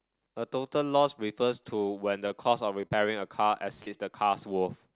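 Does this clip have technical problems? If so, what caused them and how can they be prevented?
Yes. A short stall from a late packet at 2.28 to 2.33 s holds the sound for about 20 ms. Unlike a loss, nothing goes missing; playback simply resumes slightly later.

Short concealed packet loss at 2.87 to 2.94 s, 3.75 to 3.81 s and 3.82 to 3.89 s drops about 40 ms each time. The gaps are filled with continued sound, so they smear rather than pause.

A steadier network path, with enough jitter-buffer headroom and redundancy or FEC, would prevent both. The narrowband sound, with nothing above 4 kHz, points to a G.711 call codec.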